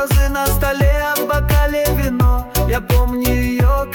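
Nothing technically wrong turns up anywhere in this bit of audio, so there's no problem to time or trace back to a cause.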